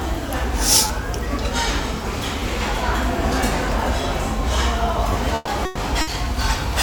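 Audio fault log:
0.88–0.90 s, 2.40 s and 5.13–5.15 s: repeated buffer. Fresh audio did not reach the output in time, so the same roughly 10.7 ms block was played again, which fits a 512-sample buffer. The block is heard twice extra at 0.88 s and 5.13 s and once extra at 2.40 s. The hard joins at each repeat make a brief buzzy stutter, and about 20 ms, 10 ms and 20 ms of following sound never play.
5.35–5.50 s, 5.65–5.80 s and 6.01–6.10 s: burst of packet loss. Runs of audio, 120 ms, 120 ms and 60 ms long, arrived too late or not at all. The receiver filled each gap by continuing the last sound and lowering it, so it is heard as a fading held buzz or hiss. The first gap also ends in about 10 ms of silence. The sound then resumes further on, with the lost stretch skipped.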